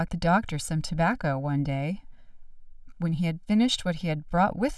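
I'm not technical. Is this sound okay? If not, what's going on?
No. Channel delay (comb filtering) runs through the whole clip, from start to finish. One side of the recording arrives about one and a half milliseconds later than the other, and when the two are combined into one, parts of the sound cancel each other out. The first gap falls around 400 Hz, with more at regular steps above it, so the speech sounds hollow and a bit phasey, as if heard through a tube.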